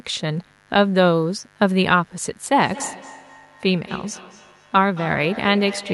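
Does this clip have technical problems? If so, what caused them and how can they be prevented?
Yes. Mains buzz: switching spikes from a dimmer, rectifier or poorly shielded cable get into the signal twice in every 50 Hz cycle. This lays a steady, raspy buzz of harmonics under the speech for the whole clip, at around 35 dB below it. Using shielded cabling and keeping the audio chain away from dimmers and cheap power supplies prevents it.

Feedback echo between two devices: from 2.63 s to the end, a second device in the same room plays the call aloud and the first device's microphone picks it up again. That device's echo canceller cannot remove sound it did not play itself. The speech comes back roughly every fifth of a second, thinner and more ringing each time, peaking about 17 dB below the speech. Muting the microphone and speaker on all but one device in a shared room prevents it.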